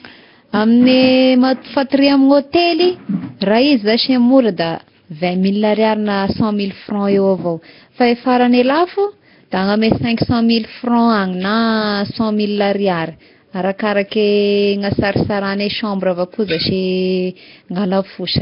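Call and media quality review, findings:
Whole clip: rough, hissy halo on the speech, smeared underwater feel, nothing above 5.3 kHz. Likely Nellymoser compression (Flash's Asao mic codec): fixed two bits a sample, starved bands filled with noise. Heavy damage, fits roughly 22 kbps.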